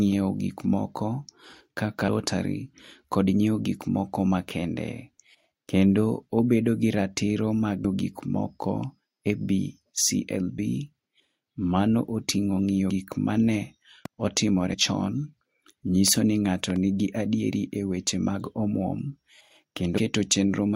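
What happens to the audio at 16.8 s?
A loud pop, two sharp clicks in quick succession, sits on top of the speech from 16.70 to 16.78 s, peaking around 10 dB above it while the speech continues underneath. This is likely a brief voltage pulse, from a plug, switch or static discharge, entering the signal path.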